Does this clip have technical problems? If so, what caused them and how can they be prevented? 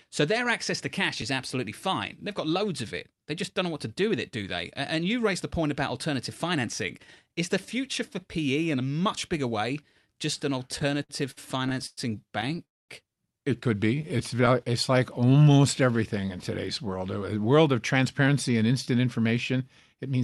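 Yes. At 1.22 s there is a tiny click: a repeated buffer, where a 5 ms piece played twice because new audio arrived late, which fits a very small buffer.

From 10.72 to 11.99 s, just after "bigger way just an", the speech drags and stutters in repeated stalls (stutter). Packets arrived late twelve times, and the receiver stretched the last sound over each gap, the longest 107 ms, for 307 ms in total. The same thing recurs more lightly from 12.41 to 12.61 s, with four gaps of up to 12 ms, and from 14.02 to 14.56 s, with ten gaps of up to 11 ms.

From 12.65 to 12.91 s the sound drops out for 240 ms, then resumes exactly where it stopped. This call audio freeze likely came from packets held up in transit, leaving the jitter buffer empty.

From 13.95 to 16.27 s, leading into "in today's world", the speech runs slow at the same pitch, at 93% speed. This jitter buffer slow-down repeated pitch periods to add 159 ms of reserve.

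From 17.98 to 20.22 s, after "world of", the speech sounds hurried at 107% speed. This jitter buffer speed-up cut roughly 150 ms to shed the built-up delay.

Prevention comes down to a steadier network path, with wired rather than wireless links and traffic prioritisation for real-time audio, plus a larger playback buffer on the device, so that packets arrive on time and the jitter buffer never runs dry or overfills.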